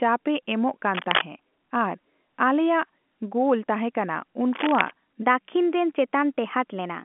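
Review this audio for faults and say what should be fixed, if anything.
A worn cable, connector or control being moved likely caused the cable scratch noise at 0.94 to 1.22 s and 4.54 to 4.92 s. Its contact resistance flickers and lays dense, ragged rustling over the speech. The first burst sits louder than the speech, the second about level with it. Replacing or cleaning the suspect lead and securing it against movement would prevent this.

From 5.22 s to the end, a section at the wrong speed, likely from a player or edit running on a mismatched clock, plays back 1.12 times too fast. Pitch and tempo rise together, so the speech sounds hurried and roughly two semitones high under the narrow telephone band. Matching sample rates across the edit and playback chain would prevent this.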